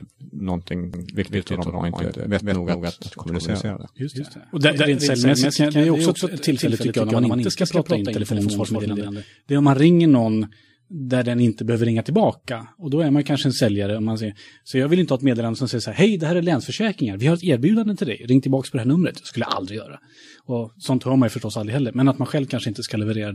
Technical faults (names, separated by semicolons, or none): doubled audio track